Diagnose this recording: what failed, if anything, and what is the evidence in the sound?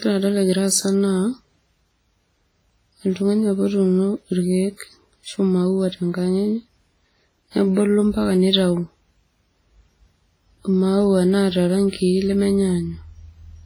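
The codec stage failed, most likely through WMA compression at a very low rate. The damage is heavy and constant across the speech: a ringing, washy quality with a hiss that swells and fades with the level, which fits an early WMA encoder running at around 24 kbps. At that rate the encoder spreads its quantisation noise across long blocks and discards weaker spectral lines, leaving the sound smeared.

Pre-echo, from the same transform coding, appears from 4.77 to 4.80 s, just after "otuuno irkeek". A sharp onset landed late in a coding block, so the noise the encoder budgeted for the loud attack was spread over the whole block, including the quiet stretch before it. The result is a brief hiss of about 37 ms leading into the attack, which itself sounds softened rather than crisp.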